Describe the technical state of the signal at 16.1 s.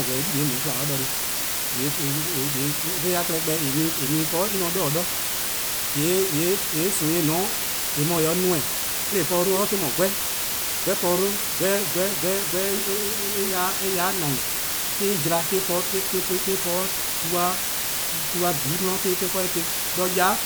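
At 16.1 s the speech carries low bit depth with dither, as it does for the whole clip. The signal is held at only 3 bits. Random dither is added before each sample is rounded to so few levels. That turns the rounding error into steady white noise instead of distortion. The result is a constant, even hiss. It sits at roughly the same level as the speech itself.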